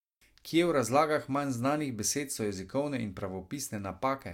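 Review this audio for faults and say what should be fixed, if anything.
Nothing stood out on listening to this speech recording, so there is nothing here that needs fixing.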